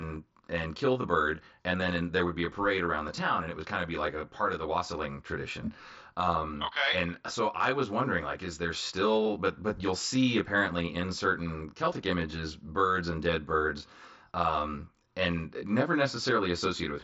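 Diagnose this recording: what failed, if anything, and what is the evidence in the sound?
Channel delay (comb filtering) is present throughout the speech, at the stage where the two channels are summed to mono. One channel arrives roughly 20 ms behind the other. Whatever they share cancels at evenly spaced frequencies, with the first notch near 20 Hz, so the sound is rough or slightly doubled. A spectrogram would show dense, fixed, regularly spaced dark stripes. The mSBC headset link's band limit, around 7.7 kHz, remains visible above them.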